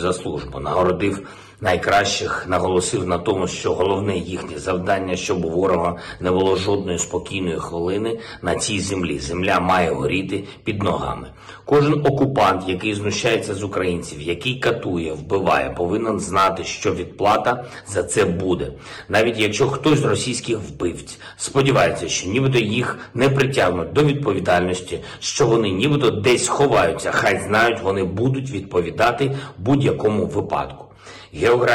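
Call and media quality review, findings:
Hard clipping throughout: an input or gain stage driven about 11 dB past full scale. Peaks are cut flat and a few percent of samples sit at the rail. Flat tops add high harmonics, heard as harsh fuzz and crackle on every loud passage.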